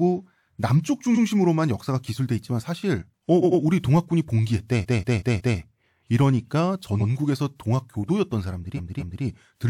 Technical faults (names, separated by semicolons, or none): repeated frames